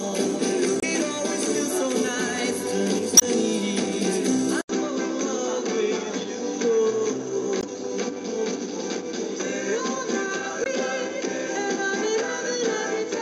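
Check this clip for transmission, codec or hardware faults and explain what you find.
Three kinds of fault are audible: compression damage throughout, four brief stream-corruption glitches, and a change to a duller input part-way through.

MP3 compression affects the whole clip. The sound has a watery, swirling texture and smeared attacks. This is likely the encoder running short of bits, around 64 kbps, so it drops weak frequency lines that flicker on and off between frames and cuts back the treble.

Damaged data in a compressed stream causes short chirps or blips at 0.77–0.84 s, 3.17–3.23 s, 7.60–7.64 s and 10.63–10.68 s. At these points corrupt bytes made the decoder misread frames, lose sync and hunt for the next valid header.

Input switched to a poorer device at 4.61 s. After a silence of about 80 ms, the sound turns duller and stays that way to the end, with nothing above 7.6 kHz and a new noise floor about 35 dB down, while loudness stays roughly the same. 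This fits the system changing to a narrower-band device.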